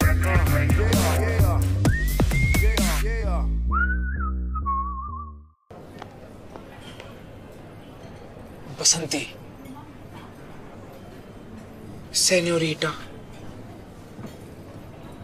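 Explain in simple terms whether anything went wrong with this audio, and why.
Nothing went wrong here; no faults can be heard.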